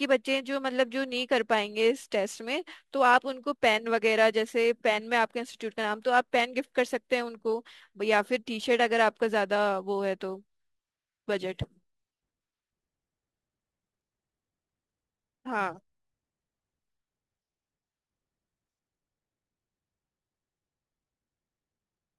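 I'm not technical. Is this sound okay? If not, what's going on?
No. Throughout the speech there is a gritty fizz riding on the louder and brighter sounds. This is crude rate conversion: the audio was resampled by simply repeating or skipping samples instead of smoothing them, which adds harsh, tuneless tones.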